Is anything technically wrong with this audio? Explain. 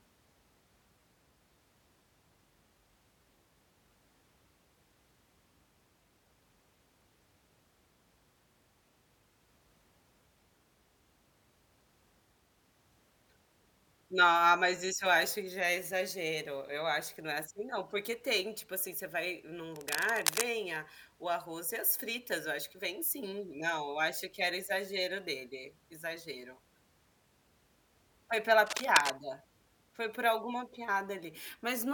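Yes. At 19.72 to 20.44 s, just before "a o arroz e", and again at 28.65 to 29.11 s, there is cable scratch noise. A worn cable or connector was likely disturbed, making its contact resistance flicker and inject dense, irregular noise bursts. These are heard as scratchy rustling over the speech, somewhat quieter than it the first time and roughly as loud as it the second.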